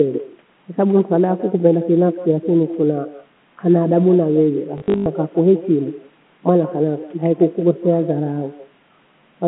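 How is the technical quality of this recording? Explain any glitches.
Two faults affect this speech recording, over a telephone-band line.

Echo with no canceller runs throughout. The far end's loudspeaker feeds its microphone, returning a thin copy about 18 dB down, roughly 150 ms late.

Packet loss with last packet repeated occurs from 4.78 to 5.06 s. About 220 ms went missing, longest run 100 ms. Repeated packets give robotic stutters.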